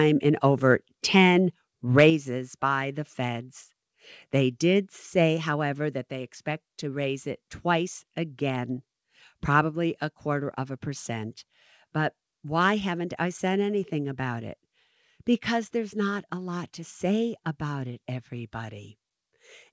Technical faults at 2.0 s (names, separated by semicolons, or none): microphone overload; microphone volume stepped down